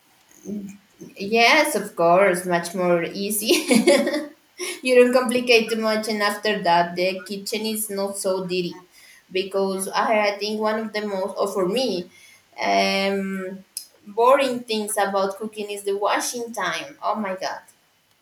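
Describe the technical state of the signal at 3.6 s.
At 3.6 s the speech signal is intact, with no audible technical fault at that moment.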